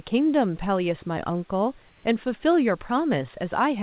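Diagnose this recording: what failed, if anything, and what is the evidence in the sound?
The call processing stage, most likely discontinuous transmission: from 1.88 to 2.04 s, the room's background is replaced by comfort noise, a steady, featureless hiss at the same level, sitting about 34 dB under the speech, until the speech picks back up.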